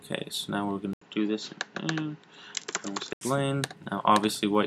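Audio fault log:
0.93–3.21 s, input switched to a poorer device: the sound drops out for 80 ms at the switch, then loses everything above 7.6 kHz and turns duller, with a new background noise about 40 dB beneath the signal and little change in loudness. At 3.21 s the fuller band returns. This likely comes from the recording input changing to a different microphone or a headset's call profile, whose narrower bandwidth and own noise floor replace the original device's character.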